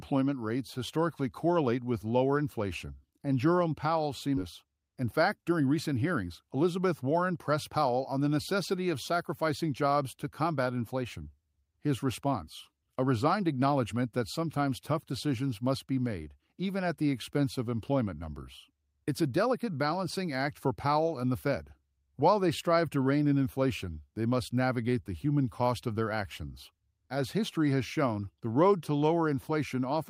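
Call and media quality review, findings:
Skip ahead, 4.37–4.39 s: about a second of sound missing, joined with no fill. Likely jitter buffer discarded queued audio on overflow, jumping playback forward.

Jitter buffer speed-up, 4.64–8.20 s: sound runs at 109% speed, same pitch. Receiver trimmed pitch-period pieces, about 0.3 s total, to drain excess buffer delay.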